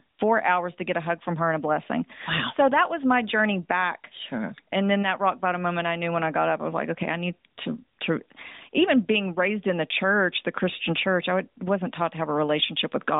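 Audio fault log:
No faults heard.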